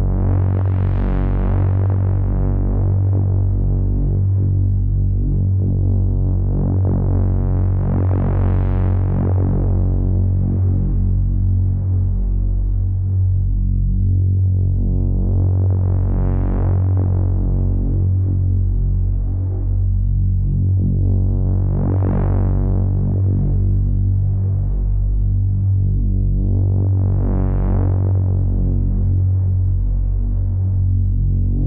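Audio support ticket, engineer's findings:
No technical fault heard in this recording of sounds. No component implicated, so no audio-side action raised.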